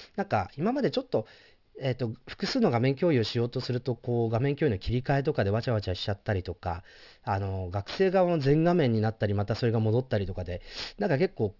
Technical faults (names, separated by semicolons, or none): aliasing